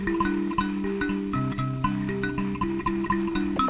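Sound dropped by the voice detector occurs at 3.56 to 3.58 s and again at 3.68 s. Each time the audio briefly gives way to steady comfort noise, likely because the sender's detector judged those closing moments to be background and stopped transmitting. The audio carries nothing above 4 kHz, which fits a G.711 call path.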